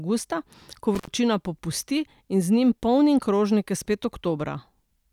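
An intermittent contact breaks up this speech clip between 0.95 and 1.08 s, where the signal drops out for roughly 81 ms. A loose plug or cable conductor briefly lost its connection, so the audio path opened and the sound vanished, leaving only faint hiss during the gap. As the contact broke and then re-made, the unstable metal-to-metal junction produced crackle at both edges of the dropout before the signal returned.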